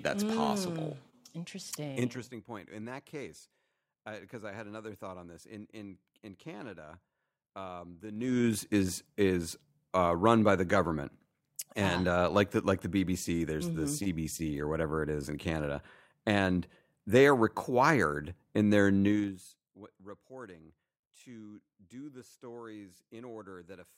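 From 1.80 to 2.28 s, the level drops by roughly 20 dB with zipper noise. The gain moves in 2 dB steps, about 30 a second, with no smoothing. Each step leaves a small click. Together they form a fast ticking on the speech. The same zipping returns from 8.08 to 8.52 s as the level rises by roughly 20 dB. It comes again from 19.04 to 19.52 s on another fall.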